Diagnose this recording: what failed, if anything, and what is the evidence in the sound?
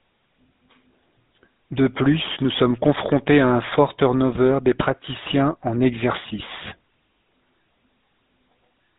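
Codec stage: GSM full-rate coding throughout the speech, with buzzy, gravelly roughness and nothing above 4 kHz, which fits the 13 kbps pulse-excited vocal-tract model.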